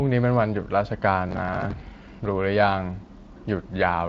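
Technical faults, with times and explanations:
1.29–1.92 s, processor overload crackle: the processor falls behind on short buffers of around 10 ms and misses about twenty deadlines over this stretch. Each miss repeats a scrap of old audio with hard edges, so the sound tears into gritty crackle until the load passes.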